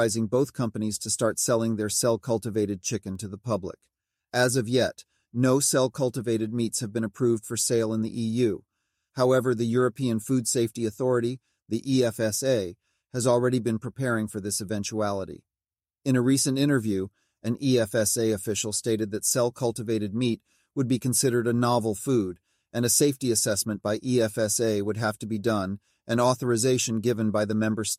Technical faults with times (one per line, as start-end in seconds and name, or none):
3.15 bit error spike